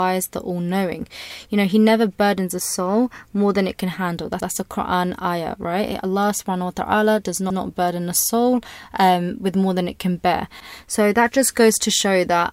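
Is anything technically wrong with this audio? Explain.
Yes. Just after "than it can handle", at 4.40 to 4.50 s, there is an overlapping chunks fault. The audio was handled in blocks of about 3.0 s, and the next block began 100 ms before the previous one had finished, so that stretch of speech is played twice at the join. It sounds like a brief stutter, with the last 100 ms jumping back and repeating before the speech carries on.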